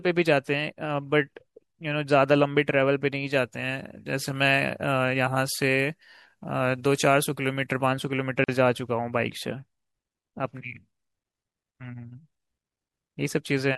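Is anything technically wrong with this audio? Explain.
Yes, two problems stand out in this speech clip.

From 3.33 to 7.86 s the sound turns thin, bright and hissy, with sibilants spitting forward. That is pre-emphasis left on: the treble was lifted before recording or transmission, and the complementary de-emphasis was never applied afterwards. The top end sits about 10 dB higher at 10 kHz than at 1 kHz, a tilt that fits the 50-microsecond FM curve.

At 8.44 to 8.48 s a 44 ms gap cuts into continuous sound, its edges smeared so the silent part is shorter, and the sound then resumes where it left off. This is a gap at a join of encoded pieces: separately encoded segments were joined without removing each encoder's start-up delay and last-frame padding, so that silence remains at the seam.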